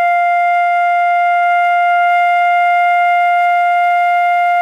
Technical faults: none

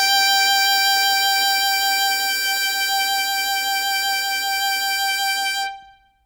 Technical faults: none

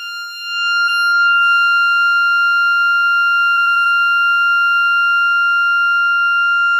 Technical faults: repeated frames

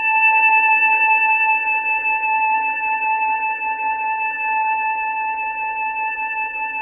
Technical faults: transcoding between lossy codecs

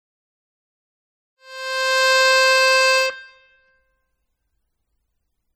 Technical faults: MP3 compression

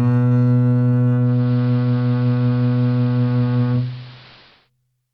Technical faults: digital radio blending to analogue

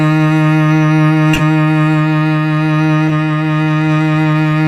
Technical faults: corrupt frame decoded

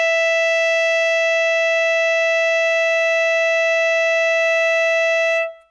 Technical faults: none

